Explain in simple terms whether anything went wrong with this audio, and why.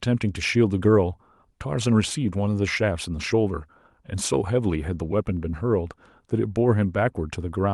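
Something did go wrong: clock drift between sender and receiver. The device sending this speech kept time with a clock running roughly five percent fast compared with the receiving end, so sound kept arriving a little quicker than it could be played. The waiting area that smooths out a call's timing kept overfilling, for the whole clip, and the receiver had to keep catching up.

To catch up, it made repeated timing corrections from 0.23 s to 7.68 s, trimming tiny slivers of sound at uneven moments, all in the same direction. That leaves the speech running at about 105 percent of its proper pace, with faint hiccups and a slightly unsteady, hurried rhythm where pieces were cut. The call's own compression, Opus, carried the audio through, and its usual coding texture can be heard underneath.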